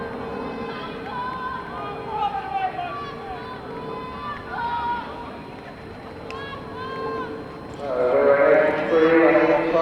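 A high, thin whistle runs under the audio from start to finish, sitting roughly 35 dB below the programme and wandering between about 4.06 and 4.21 kHz. This is switching supply whistle: a switch-mode power supply feeding the recording chain has dropped into an audible burst mode or is beating against another converter, and its frequency shifts as the load on it changes.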